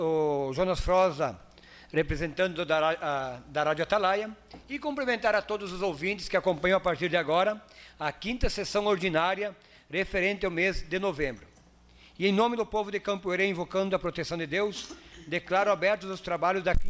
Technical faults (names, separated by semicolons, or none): resampler restarted on every block